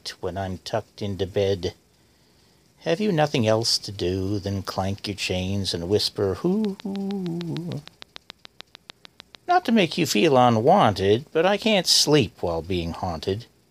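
From 6.65 s to 9.66 s a train of clicks runs over the sound, a steady ticking at 6.65 clicks per second, around twenty in all, each well above the surrounding level and audible in quiet gaps too. The even spacing and matching shape point to periodic pulse injection, likely interference from nearby equipment or a faulty connection or power supply. On a waveform they appear as evenly spaced spikes; a spectrogram shows a row of thin vertical broadband lines.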